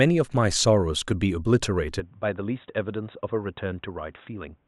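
At 2.00 s the speech suddenly turns dull and boxy, with nothing above 3.8 kHz, and it stays that way to the end of the recording. No silence separates the two halves. The level drops by roughly 5 dB and a new, faint background noise comes in well below the signal. This points to an input switched to a poorer device, likely a fallback microphone or a headset's narrowband call profile, which carries its own tone, gain and noise floor.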